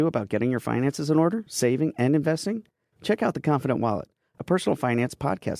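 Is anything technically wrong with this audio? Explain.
No, the speech signal shows no technical faults at any point, with nothing audible in it that points to a problem in recording, processing or playback.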